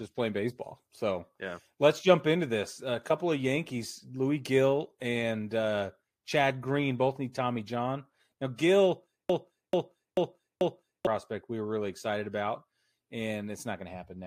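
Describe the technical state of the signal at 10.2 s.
A broken-record loop spans 9.30 to 11.07 s: a 439 ms piece of speech plays four times back to back, likely from a stalled stream resending its last fragment, so the intended audio is lost. Spectrogram and waveform show identical blocks tiled end to end.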